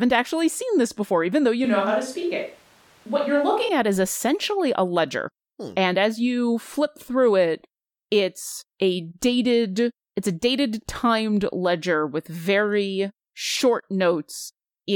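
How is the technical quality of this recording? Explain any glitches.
The recording has one glitch. Switch to a distant microphone, 1.65 to 3.69 s: the close microphone likely dropped out, so the speech turns abruptly hollow, roomy and thin in the bass, starting at "at is essentially a".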